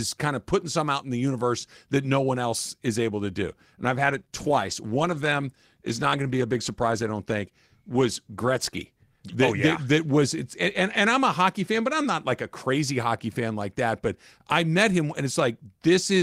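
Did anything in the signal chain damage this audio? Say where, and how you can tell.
Yes, a call bitrate drop in the codec stage. From 3.84 s to 9.13 s the speech turns coarser and duller, with the top end thinned out, which fits the encoder falling from 32 to 16 kbps, held at the lower rate for about 5.2 s.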